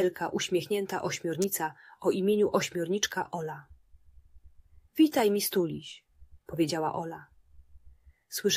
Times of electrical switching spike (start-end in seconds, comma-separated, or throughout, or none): 1.42, 5.19